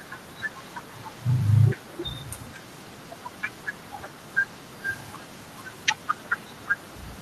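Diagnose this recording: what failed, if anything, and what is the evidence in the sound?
Echo leak, audible from 0.0 s to 7.22 s, the full length of this speech recording. Behind the direct speech sits a faint delayed copy of it, well below the main level, trailing by about 361 ms. The stage is call processing: the far end is likely playing the call over a loudspeaker, and its echo canceller failed to subtract everything its microphone collected. That residue was sent back, so the speech returns as a quiet repeat after the round-trip delay.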